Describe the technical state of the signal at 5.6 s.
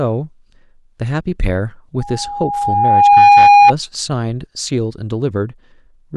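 At 5.6 s the speech signal is intact, with no technical fault audible at that moment.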